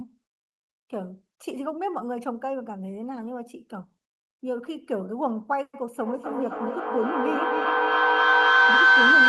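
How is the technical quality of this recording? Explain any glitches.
The recording has one serious fault: a feedback howl that takes over the last part of the clip.

From 5.91 s to the end at 9.29 s, a feedback howl builds up. A microphone is picking up a loudspeaker carrying the same call, and each pass around that loop comes back louder. The repeats narrow onto a tone of roughly 1.5 kHz, with a loop delay of about 0.3 s. It peaks about 12 dB above the speech and does not stop before the clip ends. The call path also limits the band, with the top end cut off around 12 kHz.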